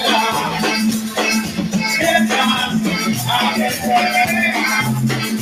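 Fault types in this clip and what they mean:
noise suppressor applied to music or sounds: A suppressor built for speech stayed active across the whole clip, treating sustained parts of the sound as noise. Its gain keeps shifting by around 5 dB, so held portions and decays dip and recover, giving a pumping, thinned-out quality.
sound cut by the noise suppressor: From 1.00 to 1.17 s the suppressor judged this stretch to be noise and pulled it down harder than its surroundings, by about 5 dB at the deepest point, so for well over a tenth of a second the sound sinks before returning.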